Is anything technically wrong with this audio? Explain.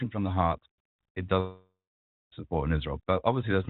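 Yes, there are two faults in this speech clip.

From 1.40 s to 2.33 s, just after "from the heart it", the sound breaks off in what is likely a long network dropout. Packets stopped arriving for about 0.92 s. The receiver tried to cover the gap by extending the last sound, which turns into a buzzy hiss that decays, and for the final 0.57 s or so it plays silence. Speech then resumes with the missing part gone. On a spectrogram this shows as smeared, fading energy followed by a blank band. On the waveform it is a tapering envelope that ends in a flat line.

Between 2.44 s and 3.01 s there are three CD scratch ticks. A blemish on the disc destroyed more data than error correction could rebuild, once per revolution, so the player concealed the damaged samples by interpolating or muting them. Each tick is very short, well under a millisecond, and is heard as a regular click of uneven strength. 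On the waveform each one is a tiny spike or notch. On a spectrogram each is a thin vertical line that runs up to the 4 kHz ceiling set by the G.711 call codec.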